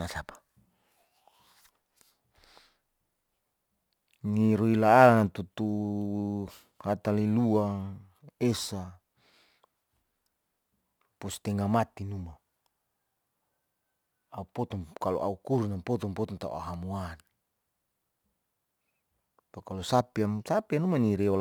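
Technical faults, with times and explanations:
Throughout: crude rate conversion. The speech carries a gritty, inharmonic fizz riding on louder and brighter sounds, roughly 30 dB down. Samples seem to be simply repeated to stretch 44.1 kHz up to 48 kHz, with no filtering, so the timing error forms stray tones.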